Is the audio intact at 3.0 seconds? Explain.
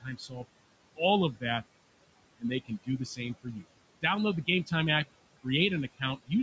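No. Between 2.65 and 3.19 s, the noise suppressor mistakes part of the speech for noise and pulls it down by up to about 17 dB, so a brief stretch sounds swallowed and faint. Throughout, noise suppressor artifacts are also present: the background noise is cut by about 21 dB between words and rises under them.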